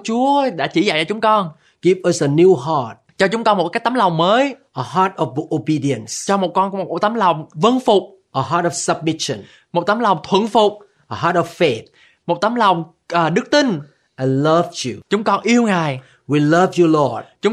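Speech recording, with nothing technically wrong to report.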